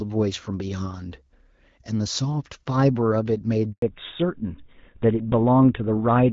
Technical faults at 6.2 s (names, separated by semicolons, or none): fallback to narrowband